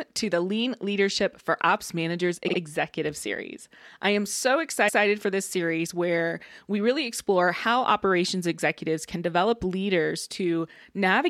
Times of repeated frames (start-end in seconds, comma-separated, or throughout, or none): 2.47-2.57, 4.87-5.03